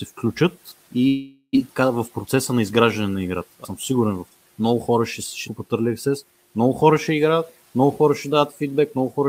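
From 1.07 to 1.57 s, a long network dropout likely cut the speech: a fading buzzy continuation fills about 476 ms, with a brief silent gap, showing as smeared harmonics decaying into the room-noise floor.

Between 2.26 and 2.72 s, a jitter buffer speed-up trims pitch periods, running speech about 8% fast at unchanged pitch. The waveform shows tiny splices, removing roughly 50 ms.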